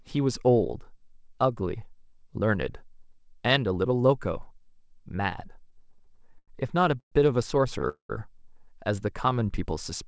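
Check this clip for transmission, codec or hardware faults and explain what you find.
Three kinds of delivery fault show up in the second half of the speech, all of them stalls or stretches where nothing is lost but time is added. The sound stops at 8 kHz throughout, which fits a wideband call codec such as G.722.

Repeated stalls (stutter), 5.64 to 6.50 s: the speech hitches about a dozen times, with roughly 0.2 s of filler in total and the longest hold at 93 ms. Packets kept arriving late, so the jitter buffer ran dry over and over, and each time the receiver carried the last sound on until data came. About a quarter of that stretch is concealment, which makes it drag and judder. What separates it from a freeze is that these are many short catches in a row, not one clean gap.

Call audio freeze, 7.00 to 7.14 s and 7.89 to 8.11 s: two single stops of 120 ms and 203 ms. A brief continuation of the last sound fades, then there is about 90 ms and about 100 ms of silence before the speech resumes exactly where it left off. 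The likely cause is packets held up long enough to empty the buffer, with playback delay growing by the same amount each time. Unlike the stutter, each event is one isolated hole.

Jitter buffer slow-down, 9.30 to 9.51 s: the speech runs at about 86% speed with no change of pitch, because 37 ms was added by repeating single pitch periods or bits of pauses to rebuild the buffer's reserve. Sounds are drawn out, but nothing stops. That continuous stretching, with no gap or fade, sets it apart from both stalls and freezes.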